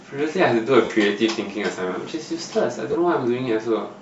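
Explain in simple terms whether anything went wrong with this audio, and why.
The audio was most likely squeezed by Bluetooth LC3 compression, the codec used by newer Bluetooth LE Audio headphones and earbuds. To save data, it throws away much of the fine high-frequency detail and fills the gap with a layer of noise. Throughout this speech, that leaves the sound with a plainly audible breathy, grainy edge, as if a hiss were woven into it.

The audio also suffered lost LE Audio frames. Twice, chunks of the wireless stream never arrived, and the decoder papered over each gap by reusing the last sound it had, scrambled so it wouldn't buzz. The first gap runs from 0.84 to 0.90 s, about 50 ms, and the second from 2.92 to 2.95 s, about 20 ms. Each one replaces the speech with a brief, noisy smear.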